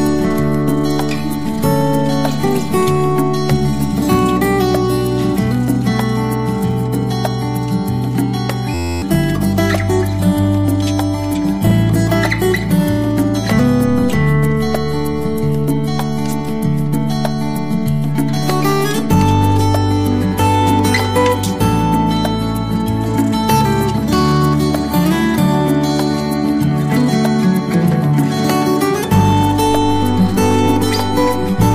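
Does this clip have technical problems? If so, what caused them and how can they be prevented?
Yes. A system hang loop occurs from 8.74 to 9.02 s. The system froze while the hardware kept replaying one 11.61 ms chunk, which fits a 512-sample buffer. The result is an 86.1 Hz buzz. A watchdog that mutes stalled output would prevent it.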